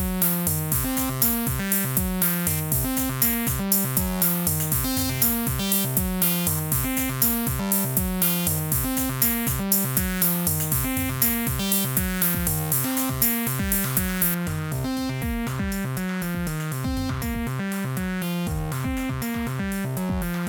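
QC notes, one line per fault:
0.00–14.34 s, pre-emphasis left on: the treble lift matching the 75 µs FM emphasis curve was applied and the complementary de-emphasis never followed, so everything above a few kHz stays boosted, reaching about 14 dB more at 10 kHz than at 1 kHz. The uncorrected tilt makes the highs dominate the lows and mids, leaving the audio thin, glassy and bright, with sibilant edges thrust forward until the section ends.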